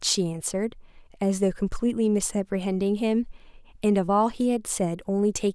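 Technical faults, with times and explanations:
No technical faults detected anywhere in the speech recording.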